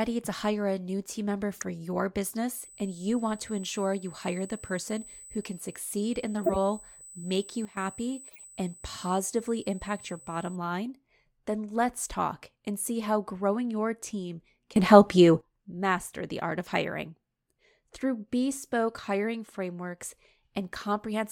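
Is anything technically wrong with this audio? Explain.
Yes, the speech has two kinds of fault. Corrupt frame decoded, at 1.53 to 1.63 s just after "a new team member", 6.44 to 6.56 s and 8.28 to 8.43 s: damaged compressed frames were decoded anyway, misplacing energy across several frames and producing brief chirpy noise bursts, loudest at 6.44 s and faint at 8.28 s. Sudden gain jump, at 7.65 to 7.77 s (about 12 dB down) and 14.76 to 15.41 s (about 15 dB up) between "how growing your team" and "master the art of": the level, background noise included, steps abruptly, likely from a gain change applied without a ramp.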